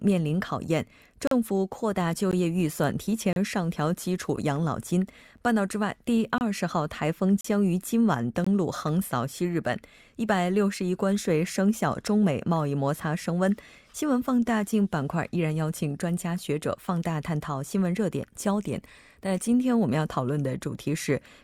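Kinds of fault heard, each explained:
Gap between stream segments: mistimed segment boundaries leave short hard-edged holes of silence in the speech, repeating about once per second from 1.27 to 8.47 s, each 10 to 40 ms, with no audio lost; waveform and spectrogram show thin, sharp-sided vertical blank stripes.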